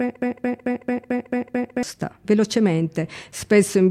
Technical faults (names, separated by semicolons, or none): broken-record loop